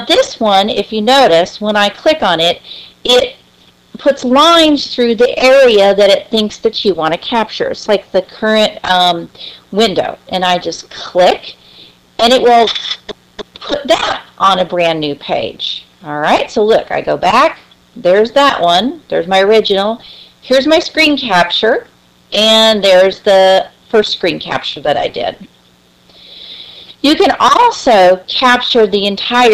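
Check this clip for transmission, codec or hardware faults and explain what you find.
There is one fault, a mains buzz, running through the whole clip. Sharp switching spikes, of the kind a dimmer or rectifier produces or an unshielded line picks up, ride on the sound twice per cycle of a 60 Hz supply. Because the spikes are so abrupt, they carry harmonics of 60 Hz far up into the kilohertz range. The result is a steady, raspy buzz sitting roughly 40 dB below the wanted sound. On a spectrogram it appears as a comb of evenly spaced horizontal lines at 60 Hz multiples, constant from start to end. In the waveform, zooming in shows small regular spikes repeating every 8.3 ms.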